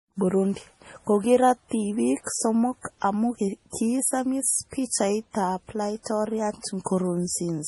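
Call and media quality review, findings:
Watery, swirly speech throughout with a hard cut above 11.5 kHz; likely heavy MP3 compression, consistent with about 32 kbps. Flickering weak bands separate it from simple low-pass filtering.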